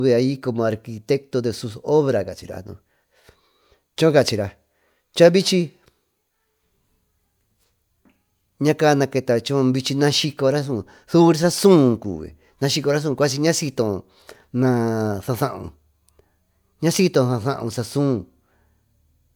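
Nothing in this speech recording stands out as a technical fault, so there are no times or causes to point to.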